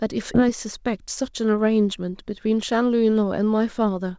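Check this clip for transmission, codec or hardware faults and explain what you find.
One transmission fault stands out: a skip ahead early in the speech, between 0.34 and 0.42 s. Somewhere around 0.4 s of audio was discarded, either lost in transit or dropped by the jitter buffer when it overflowed with later packets already queued. Playback leaps forward with no silence, so speech on either side of the gap is spliced almost directly, with only about 12 ms of bridging. On a waveform the envelope changes abruptly at that point. A spectrogram shows formant tracks breaking off and resuming at unrelated positions along a vertical seam. The missing content is simply absent. The content ceiling at 8 kHz fits the wideband G.722 call codec carrying the audio.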